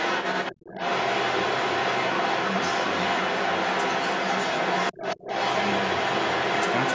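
From the start to the end of the clip, the other side's voice leaks through. A second, fairly loud voice sits about 10 dB above the speech. An incompletely cancelled loudspeaker echo is the likely cause.

From 4.93 to 5.27 s, the speech is suppressed in double talk. The talker's voice dips by around 15 dB in pieces totalling about 200 ms. The echo canceller likely turned both voices down together.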